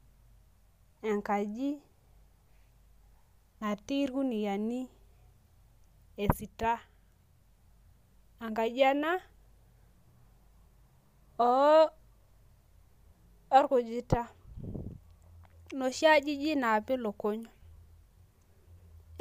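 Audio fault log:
No technical faults can be heard anywhere in the speech signal.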